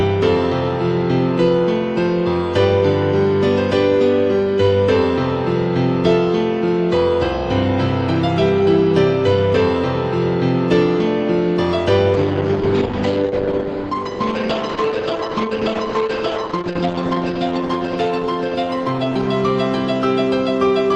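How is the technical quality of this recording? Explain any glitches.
The recording has one clear glitch, a call bitrate drop, on top of the Opus call path, whose coding keeps the spectrum capped at 12 kHz outside the drop.

From 12.14 s to 20.13 s the encoder was pushed to far fewer bits, which fits a fall from about 32 kbps to around 9 kbps. It therefore codes more coarsely and trims the band. The sound turns rough and muffled, bottoming out for about 4.9 s, then clears at 20.13 s. On a spectrogram, the top edge drops from 12 kHz to 8 kHz, with blotchier texture below.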